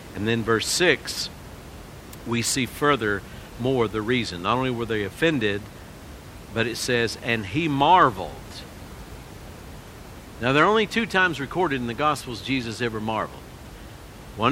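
Nothing stood out on listening to the speech, with the room's background noise sitting about 18 dB below it as part of the recording itself.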